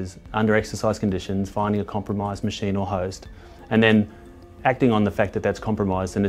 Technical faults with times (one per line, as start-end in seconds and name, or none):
none